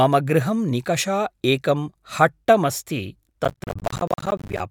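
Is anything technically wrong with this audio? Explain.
Yes. From 3.45 to 4.60 s, processor overload crackle: roughly 10 ms buffers repeatedly miss their deadlines and drop to silence, giving a sustained gritty tearing rather than one isolated dropout.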